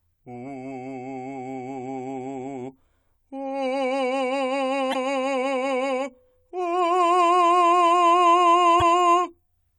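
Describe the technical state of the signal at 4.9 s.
At 4.9 s the music hits damaged data in a compressed stream, spanning 4.90 to 4.96 s, about 56 ms. The encoded bytes for that stretch are wrong, so the decoder misreads or rejects the affected frames, drops out of sync, and scans forward for the next valid frame header before decoding resumes. The result is a short burst of chirp, squawk or blip that breaks into the music for that fraction of a second.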